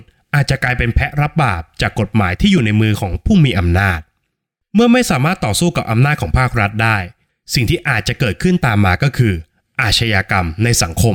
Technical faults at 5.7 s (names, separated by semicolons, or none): dropped samples